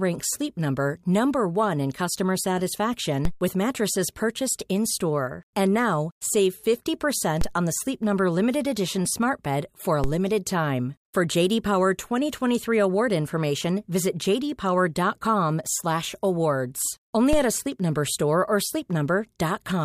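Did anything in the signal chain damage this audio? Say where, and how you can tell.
Yes. The converter's zero line jumped by about -12 to -13 dBFS at 3.25 s (before "with mattresses purchased"), 7.41 s (before "on the"), 10.04 s ("for a" / "limited time") and 17.33 s. Each DC step thumps, then decays through a 5 Hz high-pass.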